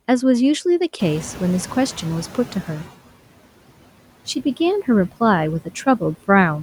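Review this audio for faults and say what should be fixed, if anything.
Noise suppressor artifacts run through the whole clip. The suppressor pulls down bands it judges to be steady noise, by about 17 dB. The leftover noise dips between words and swells beneath them. Tuning the suppressor for less aggressive reduction and smoother gain changes would prevent this.

The noise suppressor is catching up from 0.99 to 2.9 s. Room noise jumps by about 15 dB around 1 s. The suppressor's noise estimate lags, so reduction starts at only about 11 dB. It settles over roughly 1.9 s. A faster-adapting noise estimate would prevent this.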